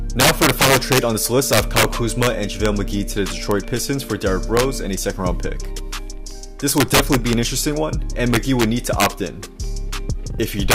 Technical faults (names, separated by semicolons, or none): integer overflow